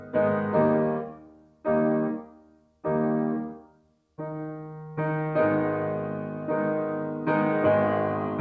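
A speech-tuned noise suppressor was left running on this music, treating its sustained tones and ambience as noise, so the level pumps by around 10 dB as held material sinks while attacks pass. The clearest cases of sound cut by the noise suppressor fall at 1.06–1.66 s, 2.22–2.84 s and 3.60–4.01 s, where sustained passages drop by about 12 dB and their decays are clipped short. Nothing is heard above 8 kHz, which fits a G.722 call codec at 64 kbps.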